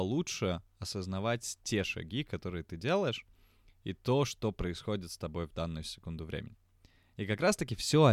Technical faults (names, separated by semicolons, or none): none